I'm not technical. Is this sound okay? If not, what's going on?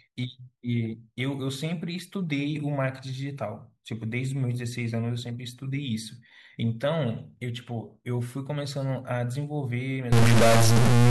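No. From about 10.12 seconds to the very end, the speech turns harsh and buzzy, like it is being pushed through a broken speaker, and any small gaps between sounds fill with a rough hiss instead of going quiet. This is likely a stuck bit: one of the tiny on-off switches that store the sound's numbers stays frozen in one position, so about half the sound's values come out wrong by a fairly large fixed step.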